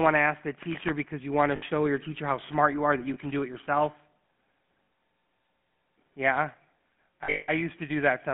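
From the start, the whole clip carries the GSM full-rate codec sound: a buzzy, gravelly roughness on the speech, fairly obvious throughout, which fits the 13 kbps full-rate mode. The codec rebuilds the voice from a vocal-tract model fed by coarse pulse excitation, so fine detail turns to grit. The line also band-limits everything to roughly 150 Hz to 3.4 kHz, which gives it that thin telephone tone.

On top of that come lost GSM frames. At 1.56 to 1.63 s there's a 60 ms patch, and at 3.14 s there's a single 20 ms dropout. Another 40 ms hits at 4.84 to 4.88 s. In each spot the decoder just repeats the last good frame, so instead of clean speech you get a brief metallic, ringing smear. The worst patch runs from 7.24 to 7.51 s, with 220 ms lost over about 240 ms and the longest run around a fifth of a second. That one gives the longest stretch of that ring before the sound returns.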